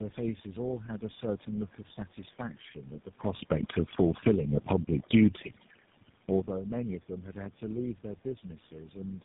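From start to finish the speech carries overdone noise removal. The suppressor is clamping individual frequency bands whenever they dip near its noise estimate, so the room background collapses into near silence with little twinkling specks, and softer parts of the voice get eaten.

Also running the whole way is tandem speech coding. The roughness, muffling and warble stack up in a way that points to several speech codecs in a row, something like three passes with GSM full rate at each end and AMR-NB in the middle. Nothing survives above 3.8 kHz.

Then from 3.85 to 4.42 s there's automatic gain falling. The gain control decides the input is too loud, or its background noise too strong, and eases the level down by about 7 dB across that half second, so voice and background sink together rather than the talker simply moving away from the mic.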